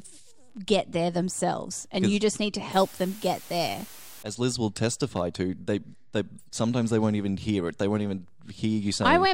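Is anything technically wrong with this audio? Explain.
Yes. From 2.73 to 4.23 s the speech is reduced to low bit depth with dither: only 7 bits, with dither turning rounding error into a steady, even hiss roughly 20 dB below the signal. A spectrogram shows a flat broadband noise floor; the waveform looks fuzzy between syllables.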